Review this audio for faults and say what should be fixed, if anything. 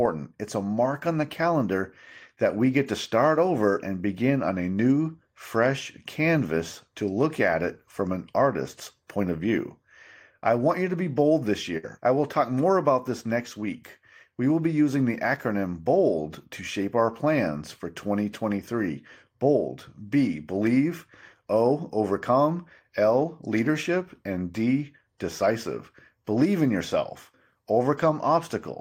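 A burst of packet loss struck from 11.77 to 11.86 s, between "be bold this" and "I will talk more". The receiver held and faded the last sound for about 57 ms, then resumed further on, so roughly 60 ms of speech is missing. Forward error correction or a deeper jitter buffer would help the stream ride out such bursts.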